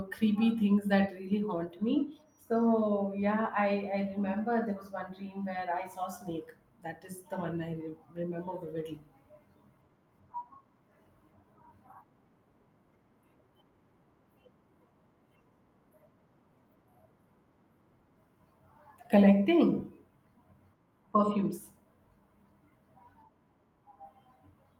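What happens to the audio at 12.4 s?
Nothing goes wrong at 12.4 s; the speech carries on intact through that moment with no audible fault.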